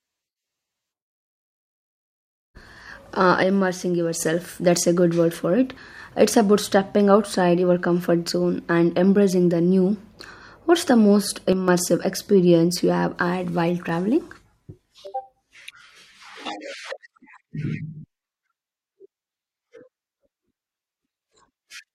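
At 3.43–4.20 s (just before "that's a good word"), 11.53–11.68 s (between "the most" and "experience you have had") and 15.07–16.46 s, the speech level falls abruptly by about 6 dB, likely because one channel drops out before the mono sum.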